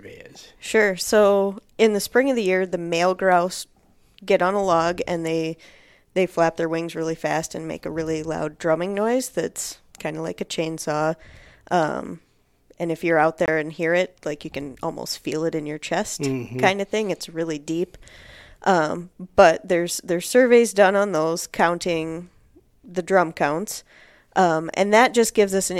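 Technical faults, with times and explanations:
13.46–13.48 s, Bluetooth dropout: the speech cuts out for about 23 ms, a short hole with abrupt or briefly faded edges, and then resumes further along rather than picking up where it stopped, as if the sound had kept playing during the gap. The likely cause is one audio packet, by the length of the gap, failing to reach the headphones in time and being discarded. On a waveform it appears as a flat, near-zero notch. On a spectrogram it appears as a thin vertical blank band across all frequencies.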